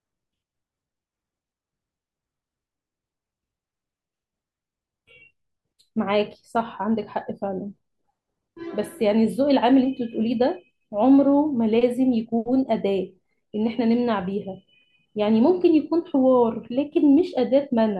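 No technical faults can be heard anywhere in this speech recording. There is nothing at any point that calls for a timestamp or an explanation.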